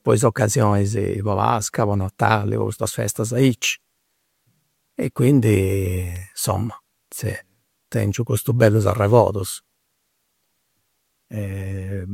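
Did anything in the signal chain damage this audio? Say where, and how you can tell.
Yes: a single sharp snap at 6.16 s sits on top of the speech, an electrical switching spike likely picked up in the analogue wiring from a nearby switch arcing.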